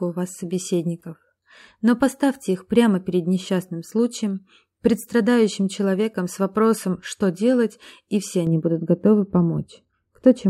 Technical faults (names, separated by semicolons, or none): de-emphasis applied wrongly